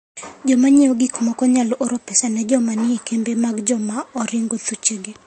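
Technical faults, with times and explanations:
Throughout, transcoding between lossy codecs: the speech stops dead at 8.4 kHz and carries two overlapping sets of smeary, warbly artefacts. That fits an MP3 pass near 55 kbit/s likely re-encoded to Vorbis near 38 kbit/s, the second codec wasting bits on the first's damage.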